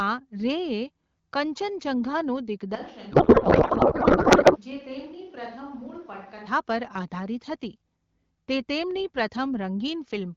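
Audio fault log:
2.75–6.47 s, switch to a distant microphone: the sound abruptly turns roomy and hollow, thinner in the bass, roughly 10 dB quieter, with background noise rising to about 25 dB below the level of the speech. The likely cause is the close microphone dropping out, leaving a pickup farther from the talker until it returns.
3.11–4.59 s, codec payload misread: the speech gives way to garbled noise and warbling that barely tracks it. This happens because the decoder unpacks the AMR-WB frames with every field shifted, which points to octet-aligned packing being read as bandwidth-efficient. Clean decoding resumes at 4.59 s.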